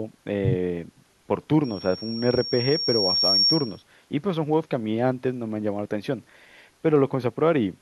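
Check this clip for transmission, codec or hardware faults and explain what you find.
Loudspeaker feedback squeal runs from 1.64 s to 3.83 s in this speech clip. A microphone is picking up the loudspeaker it drives, and at 5.6 kHz the round-trip gain through that loop is above unity, so each pass reinforces the tone. It swells over roughly two seconds into a piercing high whistle that sits about 5 dB above the speech, until the squeal stops at 3.83 s.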